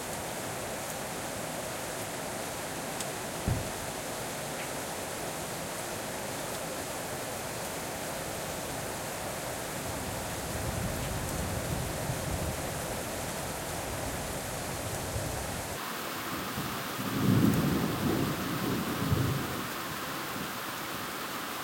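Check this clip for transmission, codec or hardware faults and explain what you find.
One fault, audio read two samples at a time (double speed), runs from 15.77 s to the end. The reader treats each pair of samples as one frame, as if the stream had two channels or double-width samples, so the audio plays 2x fast and 12 semitones (an octave) higher. On a spectrogram, features jump up an octave and squeeze horizontally. On a waveform, events arrive twice as densely.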